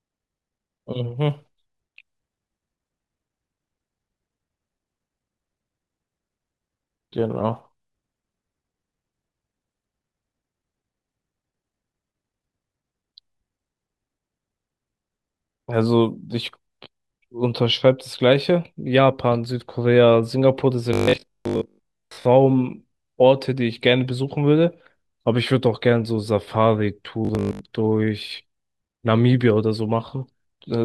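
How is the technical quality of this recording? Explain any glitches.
Two glitches stand out in this speech. Both are robotic sound from repeated short buffers. The first runs from 20.93 to 22.25 s. The second is shorter, from 27.25 to 27.61 s. In each, the voice turns into a rigid, metallic buzz at 50 Hz that still loosely follows the words. New audio was likely arriving too seldom, so playback kept looping the last chunk. A 50 Hz buzz fits a 20 ms chunk. For most of each stretch, the real audio was skipped.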